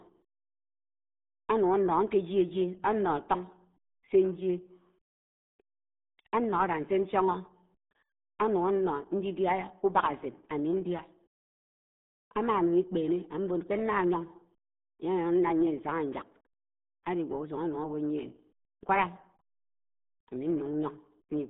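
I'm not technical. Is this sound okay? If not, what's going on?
No. From start to finish the speech sounds muffled and gargly, as if squeezed through an old telephone with a wet, bubbling edge on every syllable. That comes from the RealAudio 14.4 codec, an early format built to push speech over dial-up modems. To fit that tiny connection it throws away everything above roughly 3.8 kHz, which removes the crispness, and it rebuilds what remains so roughly that the voice turns watery.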